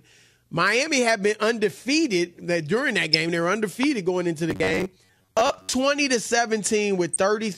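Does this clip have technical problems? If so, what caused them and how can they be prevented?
Yes. A short glitch at 3.13 s, just after "undefeated that during that", and another at 7.13 to 7.16 s are a corrupt frame decoded. Flipped bits in the compressed stream made the decoder put energy at wrong frequencies for about two frames the first time and about three the second. Adding error detection and concealment, so damaged frames are replaced rather than played, prevents this.

A sharp loud pop at 3.83 to 3.85 s, just before "going into", stands about 10 dB above the sound, which carries on underneath. It is likely a voltage pulse from a plug, switch or static discharge entering the signal chain. Securing connections, grounding equipment properly and muting before switching prevents it.

From 4.51 to 5.74 s, right after "going into", the sound becomes a rigid metallic buzz at 93.8 Hz: robotic sound from repeated short buffers. 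Audio likely arrived too seldom, so roughly half the time was filled by repeating the last buffer. That repetition rate fits a buffer of about 10.7 ms. Larger buffers and a steadier processing schedule prevent it.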